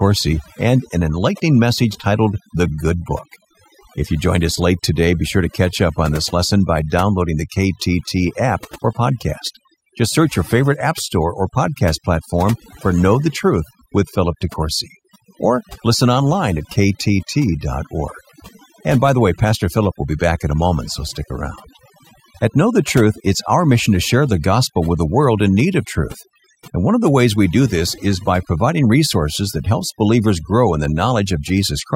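A speech recording with overdone noise removal throughout. The noise reduction was set too hard. Bands near its noise estimate are pulled down or cut. The background in pauses drops and breaks up into twinkling specks. Soft parts of the voice vanish.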